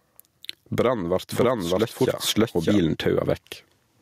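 A speech recording with gain pumping from start to finish. The gain swings by roughly 15 dB. Loud and soft parts sit too close in level. The likely cause is gain set far too high, with a fast limiter clamping down. From 1.32 s to 2.78 s there is a doubled audio track. A second, full-band copy runs about 0.7 s behind at roughly the same loudness. It has no decay or room colour, and it starts and stops abruptly. It likely comes from a slower second capture path or an edit holding two copies out of step.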